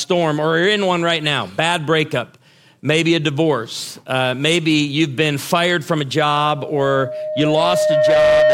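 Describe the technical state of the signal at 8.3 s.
At 8.3 s a loudspeaker feedback squeal is sounding, running from 6.35 s to the end. A 614 Hz tone swells over about two seconds, sitting roughly 5 dB above the sound.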